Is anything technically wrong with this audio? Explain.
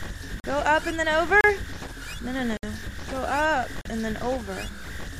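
Yes. There are four blocks of digital silence: 0.40–0.44 s (40 ms), 1.41–1.44 s (32 ms), 2.57–2.63 s (62 ms) and 3.81–3.85 s (40 ms). Stretches of samples were zeroed, probably from an underfilled output buffer, so the sound stops abruptly and returns, heard as short holes. On a waveform they appear as flat lines at zero, and on a spectrogram as blank vertical gaps bordered by thin broadband streaks.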